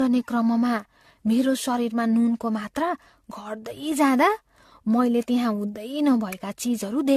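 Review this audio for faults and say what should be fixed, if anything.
Generation loss runs through the whole clip. The speech sounds swirly and hollow, attacks blur, and nothing lies above 14 kHz. The likely cause is about seven lossy re-encodes, consistent with AAC-LC at 64 kbit/s. Each pass re-quantises on a shifted frame grid, so noise and spectral holes stack up. Edit from a lossless master and encode only once.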